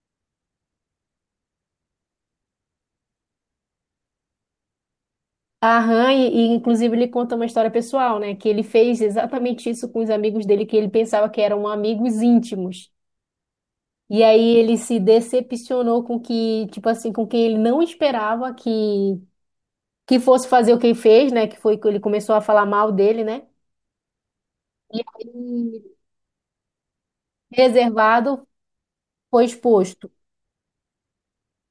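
No technical faults are audible.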